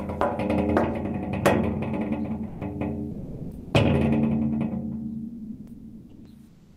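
At 2.47 s the sound cuts out for 140 ms and steady noise takes its place; the most likely cause is sound dropped by the voice detector, as in Opus discontinuous transmission, where quiet non-speech material is judged to be background and not sent. The same happens from 3.11 to 3.73 s, with about 570 ms of the actual sound missing inside a 620 ms gap, and from 5.27 to 6.25 s, where roughly 690 ms of sound is lost within nearly a second of filler. Each time the sound returns once the detector fires again.

From 6.47 s to the end, comfort noise replaces the background for about 0.3 s. The real ambience, sitting about 29 dB below the loud parts, likely gives way to smooth, featureless synthetic noise generated while transmission is paused, and it is about 2 dB quieter than the background it replaces.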